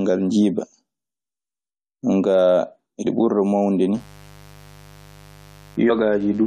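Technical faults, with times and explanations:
3.05 s, compressed frames skipped: Roughly 20 ms of audio vanishes just before "ɓurda mawnude". The decoder jumped ahead past the missing frames.
3.94 to 6.46 s, mains buzz: A steady, raspy 50 Hz buzz enters after "ɓurda mawnude", about 25 dB below the speech. Switching spikes twice per cycle spread harmonics into the kilohertz range.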